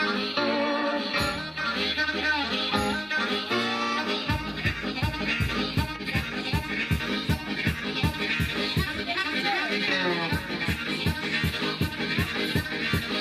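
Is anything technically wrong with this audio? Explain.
No, nothing technically wrong can be heard in this audio.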